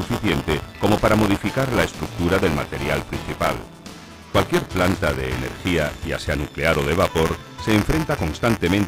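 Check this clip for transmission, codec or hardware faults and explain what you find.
One hardware fault is present. Buffer tearing runs throughout: writer and reader cross each period, splicing a small slice of audio about 20 ms old, giving a 172 Hz rattle fitting a 256-sample buffer.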